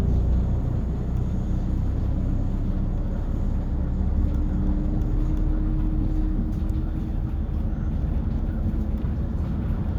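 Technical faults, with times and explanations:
No technical faults can be heard in this audio.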